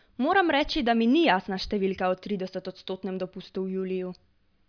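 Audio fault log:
No faults heard.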